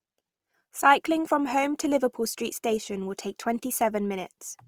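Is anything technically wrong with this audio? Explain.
Yes. Throughout the speech, Opus compression is likely the cause of plainly audible codec damage. The music-mode coder fills starved bands with folded or noise content, so tones turn rough and grainy, consistent with roughly 24 kbps, while the band stays full up to 20.5 kHz.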